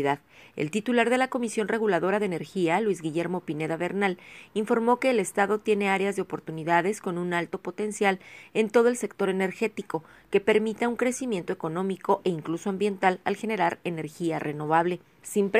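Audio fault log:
No audible faults detected anywhere in the recording.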